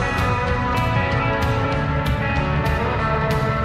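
At 0.74 s the sound jumps forward abruptly, skipping roughly 50 ms with no silence in the gap. This is likely audio missing between chunks, lost as one 0.5 s chunk closed and the next opened. Unlike a dropout, nothing goes quiet; the two sides are spliced directly.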